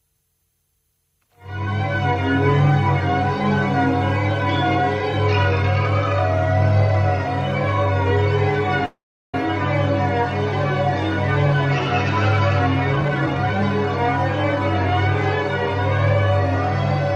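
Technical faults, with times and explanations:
8.85–9.35 s, call audio freeze: the sound halts for 0.48 s, with the last moment briefly continued and then about 370 ms of silence. Likely the packets were held up in transit and the jitter buffer ran dry. The audio then resumes where it stopped, so nothing is lost and everything after runs 481 ms later.
12.93–13.62 s, jitter buffer speed-up: the sound plays at 146% speed without any change in pitch. The buffer had built up surplus delay, and the receiver trimmed around a third of a second by cutting many short pitch-period slices in a row, which makes this stretch sound hurried.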